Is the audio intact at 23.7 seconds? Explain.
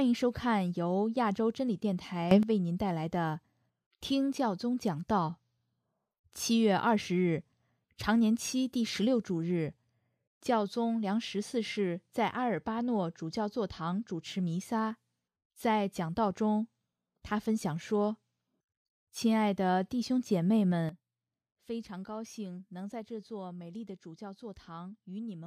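No: a sudden gain jump at 20.89 s drops sound and background together by about 12 dB to the end, likely an unramped gain change.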